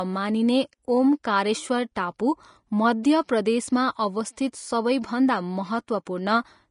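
From start to finish the speech has a grainy, hissy edge, and nothing comes through above about 10.5 kHz. That's likely Vorbis compression at a low setting, around 33 kbps by the sound of it, where coarsely quantised treble turns into noise and attacks smear.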